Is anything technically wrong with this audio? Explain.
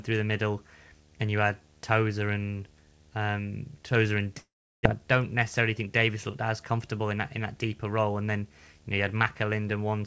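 Yes, there are three problems in this speech clip.

Video or display buzz runs the whole way through: a 75 Hz buzz with hash riding on top, sitting about 30 dB under the speech. That's a screen or video cable coupling into the audio, buzzing at the picture's field rate.

From 4.38 to 4.87 s there's a gap, likely a long network dropout just before "I don't". The receiver stretched the last sound into a fading buzz or hiss for a while, then left about 360 ms of silence, and roughly 400 ms of audio never came back.

Between 5.59 and 6.10 s, after "I don't" and leading into "looked as comfortable in", there's a jitter buffer speed-up. With too much audio queued, the receiver trimmed tiny pitch-period slices, around 50 ms in total. That pushes the speech to 108% speed at the same pitch, so it sounds briefly rushed.

The G.722 call path explains why nothing reaches above 8 kHz.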